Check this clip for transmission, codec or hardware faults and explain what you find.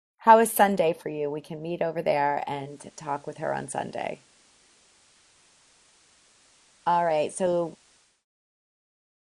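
One fault: digital radio blending to analogue from 2.50 to 8.25 s. The receiver lost the digital stream and crossfaded over about 0.3 s to the FM signal, dropping level about 1 dB. A spectrogram shows hiss filling the background, roughly 30 dB down.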